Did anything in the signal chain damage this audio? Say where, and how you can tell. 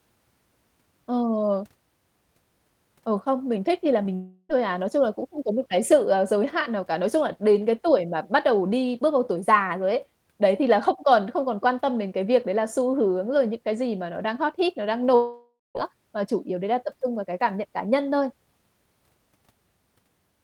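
Yes. The damage happened at the network stage, in two kinds.

Short concealed packet loss: at 4.03 to 4.07 s, just after "thích thì là", about 20 ms of speech failed to arrive and the decoder covered the gap by extending the preceding sound before blending back. You hear a brief smear or wobble.

Long network dropout: this is likely the cause of two longer gaps. The first runs from 4.15 to 4.51 s, after "thích thì là", and speech resumes at "thôi à". The second runs from 15.15 to 15.77 s, after "hot hit nó đang", and speech returns at "mà chủ yếu đấy". In each gap the receiver continued the last sound as a fading buzz or hiss. During the second one, the final 170 ms or so collapses to silence. On a spectrogram these appear as smeared, decaying bands, and the audio after each gap picks up without the lost material.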